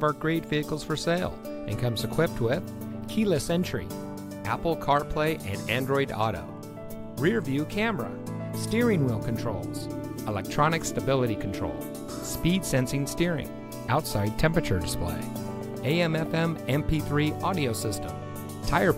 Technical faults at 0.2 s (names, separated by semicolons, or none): none